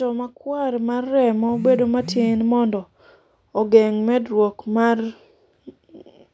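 Speech, with automatic gain rising between 0.44 and 2.17 s: the gain control judged the input too quiet and raised its level by about 5 dB over that span, so the voice and the background noise swell together. The call microphone processing leaves nothing above 8 kHz.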